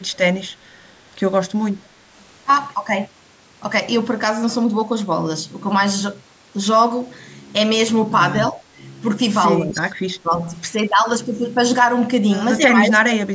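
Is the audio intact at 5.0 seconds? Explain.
Yes, the audio is intact at 5.0 seconds: the speech there passes cleanly through the call's microphone processing, whose band-limiting to nothing above 8 kHz and trimming of the lowest bass are normal for a call and not a fault.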